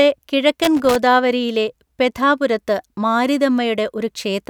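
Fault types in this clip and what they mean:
Loose connector crackle: a worn or dirty contact made and broke intermittently, chopping the speech signal into an irregular scratchy crackle from 0.63 to 0.96 s.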